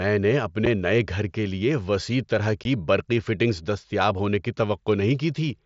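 Unconcealed Bluetooth headset packet loss drops tiny packets and leaves silence in their place. A 7.5 ms gap at 0.66 s comes just before "نئے گھر کے لیے". A 15 ms gap at 2.64 s falls between "کے لیے وسیع طرح" and "برقی فٹنگز دستیاب ہونے". Each is an abrupt-edged hole, seen as a flat-line waveform notch and a thin vertical blank band in the spectrogram.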